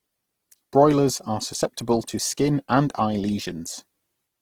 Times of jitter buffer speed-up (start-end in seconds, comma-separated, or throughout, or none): none